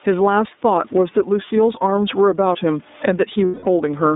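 Speech clip, about 4 s, with level pumping across its whole length. The level swings by something like 15 dB, with room noise sitting about 43 dB below the speech. The likely cause is gain pumping: input gain set far too high, with a fast limiter or compressor clamping each peak and squeezing loud and soft passages together. The entire clip also carries iLBC codec damage. The band is confined to roughly 200 Hz to 3.7 kHz, and the speech has a rough, synthetic edge, consistent with iLBC's 13.33 kbps mode with 30 ms frames coding each frame's excitation independently. From 3.45 to 3.67 s the audio turns into a held, slightly buzzy vowel lasting about 210 ms, which fits seven lost iLBC frames concealed by repeating the last pitch cycle mixed with noise. Because iLBC frames are coded independently, the voice returns cleanly right after the gap.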